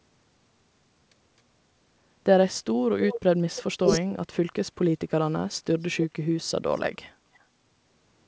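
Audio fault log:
3.07–3.21 s, 6.01–6.05 s, 7.34–7.38 s: echo leak. A faint delayed copy of the speech trails in, about 270–280 ms behind, roughly 10 to 15 dB down in the first two and barely there, around 40 dB down, in the last. Most likely the far end's canceller let some loudspeaker pickup slip back.
3.82–4.06 s: speech suppressed in double talk. The talker dips by as much as about 25 dB, adding up to around 150 ms. Likely both ends talked at once, and the canceller, unable to tell them apart, pulled everything down together.
4.39–5.66 s, 6.05–6.47 s, 6.96–7.25 s: background gated by the echo canceller. The room tone sags by up to about 16 dB for stretches of roughly 700, 400 and 300 ms, then comes back. The canceller clamped the mic hard while the loudspeaker played, then let go.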